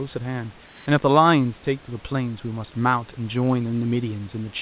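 Discontinuous transmission likely paused the sender from 0.66 to 0.86 s. Comfort noise replaces the background there with a steady, featureless hiss about 3 dB quieter.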